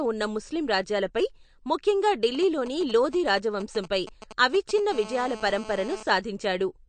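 Throughout the speech there is a watery, swirling quality, with s sounds turning metallic and chirpy and onsets smeared. Nothing is heard above 9 kHz, a hard ceiling rather than a gradual roll-off. This is likely MP3 compression at a low rate, roughly what a bitrate near 49 kbps would produce. Short of bits, the encoder cut the treble at a fixed point and let weak frequency lines blink in and out from frame to frame. The damage is plainly audible.

From 2.35 to 4.80 s, right after "ఉన్న ముస్లిం రాజ్యాలపై ముఖ్యంగా", GSM signalling bursts break in at around 15 dB below the speech. A nearby 2G phone was exchanging brief signalling transmissions with the network, and the audio circuitry rectified those radio pulses into sound. They come as a galloping dit-dit-dit of short buzzes pitched at 216.7 Hz. Unlike a continuous phone buzz, they are clustered and intermittent.

From 4.92 to 6.03 s the pattern turns into a continuous GSM phone buzz at about 16 dB below the speech. 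The phone was now in a call, transmitting its bursts 216.7 times a second without a break, and rectification turned that steady pulse train into a hard, raspy tone rich in harmonics. What separates it from the earlier bursts is that it is unbroken, a sustained drone with no gaps and no galloping rhythm, and it has no relation to the speech.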